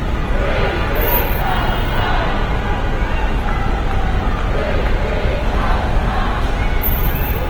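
Opus compression throughout: sounds turn grainy and rough, likely from the music mode noise-filling starved bands at a bitrate near 16 kbps, with content still reaching 20.5 kHz.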